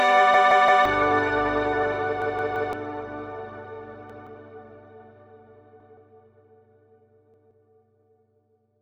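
A repeated buffer stutters at 0.34–0.85 s and 2.22–2.73 s, where one 0.17 s chunk sounds four times, and at 4.10–4.27, 5.80–5.97 and 7.34–7.51 s, where it sounds twice. Audio arrived late and the device replayed the last chunk, which fits an 8192-sample buffer. Unlike a dropout, nothing falls silent; identical copies follow each other with hard joins.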